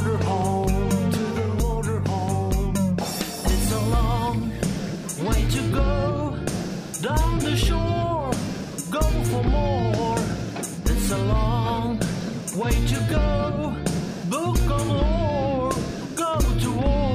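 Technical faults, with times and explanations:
1.53 s and 11.77 s, dropped samples: each is a single sharp click. The likely cause is a handful of samples missing from the stream, making the waveform jump ahead. Unlike a dropout, no audible gap follows, because the loss lasts a fraction of a millisecond.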